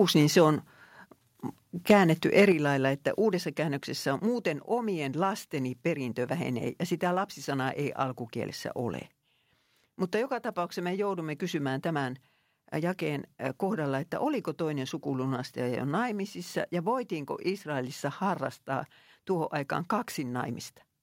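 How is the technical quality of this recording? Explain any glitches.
The recording has level problems in its first few seconds: loud peaks distort, and then the overall level drops twice.

From 0.16 to 0.42 s, 1.90 to 1.94 s, and 2.37 to 2.43 s (just before "lailla että uudessa käännöksessä"), peaks turn harsh and crackly. This is likely microphone overload. Peaks exceed the converter's ceiling by about 2, 6 and 3 dB, so their tops are sliced flat.

At 2.52 s, just before "lailla että uudessa käännöksessä", speech and background drop abruptly by about 6 dB. At 3.54 s, between "lailla että uudessa" and "käännöksessä on muuten omien", they drop by about 2 dB more. This is likely the microphone volume being stepped down by software reacting to the clipping.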